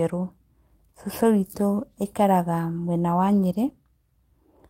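No technical faults turn up anywhere in this recording of speech. Nothing breaks up, drops out or distorts along the way.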